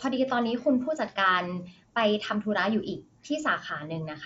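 Nothing stood out on listening to this speech clip, which comes through a Bluetooth mSBC headset link with its speech band reaching up to about 8 kHz.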